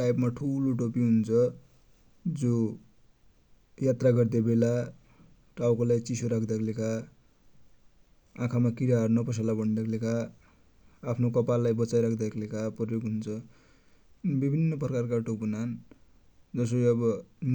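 No technical faults can be heard in the speech. Nothing at any point in the recording points to a problem in how it was captured or delivered.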